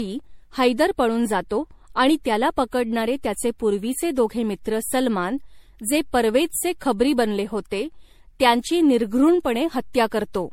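Generation loss throughout: speech sounds swirly and hollow, onsets blur, and the spectrogram shows speckled holes, nothing above 16.5 kHz, likely from repeated MP3 re-encoding.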